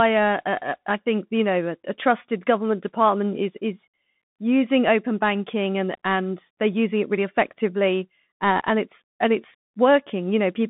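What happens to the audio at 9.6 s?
At 9.6 s the speech is still passing through the Bluetooth CVSD headset codec, which colours the whole clip rather than starting there. The line band runs from about 150 Hz to 3.6 kHz, with nothing above 3.8 kHz, which fits a 64 kbps one-bit delta stream whose adaptive step lags fast, loud high-frequency content. The result is plainly audible: muffled, phone-like speech, scratchy sibilants, and a granular hiss beneath the speech.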